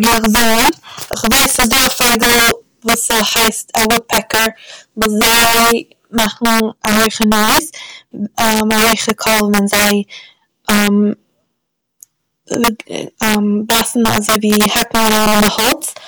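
Integer overflow runs throughout this speech: with the signal driven about 11 dB hot, peaks wrap to the opposite sign instead of limiting, producing violent cracks on roughly one sample in fourteen.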